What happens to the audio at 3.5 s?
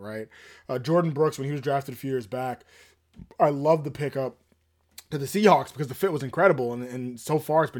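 Nothing goes wrong at 3.5 s: the audio is intact there, with no dropout, click, glitch or change in level or tone.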